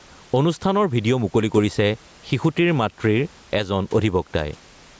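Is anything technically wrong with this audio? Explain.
Yes. Gain pumping runs throughout the speech: the level likely sits far too high for the microphone, so a fast limiter clamps down on each loud syllable. The room noise sits about 38 dB below the speech, and the gain swings by around ten decibels, squashing the dynamics.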